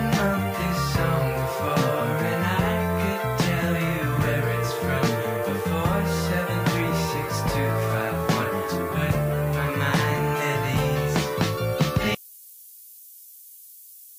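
Across the whole clip there is low bit depth with noise shaping: the audio has been rounded to very few levels, consistent with 7-bit quantisation, and the rounding error pushed upward in frequency. The result is a constant thin hiss, rising sharply toward the treble, only about 15 dB below the signal.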